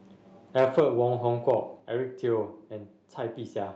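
At 1.80 s the speech and the room sound behind it drop together by about 5 dB in a single step and stay at the lower level. This is most likely a microphone volume stepped down by the call software reducing the device's input gain. Unlike automatic gain control riding the level or a compressor pumping, there is no gradual slide or recovery, just one clean step. The band-limited sound of the call path, topping out near 8 kHz, is unaffected by the drop.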